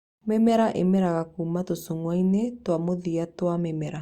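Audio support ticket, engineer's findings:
No audible faults found on this speech clip; no component or mechanism to attribute, ticket can close.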